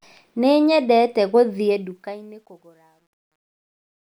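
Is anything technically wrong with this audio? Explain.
Yes. The fade-out that starts around 1.6 s suffers truncation distortion on a fade, from 1.61 s to 4.02 s. Low levels are rounded into coarse square steps without dither, which fits a stage keeping only 10 bits. The speech turns gritty, worst from 2.37 s to 4.03 s.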